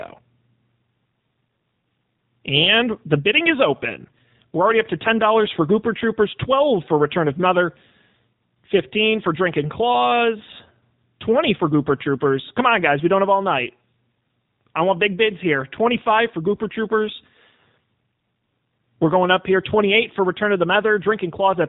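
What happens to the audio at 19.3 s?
The AMR narrowband mobile codec is present at 19.3 s, as it is throughout the clip. It codes speech through a vocal tract model, with nothing above 4 kHz passing. The damage is plainly audible as a buzzy, synthetic quality, which fits a 7.4 kbps mode.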